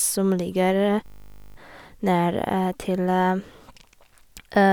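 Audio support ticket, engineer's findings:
System hang loop, 1.06–1.56 s: steady 50 Hz buzz, one 20 ms slice repeated exactly 25 times. Driver froze, hardware kept replaying its ring buffer. Buzz, not the silence of a dropout.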